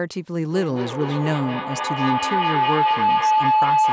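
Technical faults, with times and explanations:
0.5 to 3.92 s feedback howl: a microphone-to-loudspeaker loop gains level each pass, so repeats grow into a tone near 1 kHz, with the loop repeating roughly every 200 ms, peaking about 5 dB above speech.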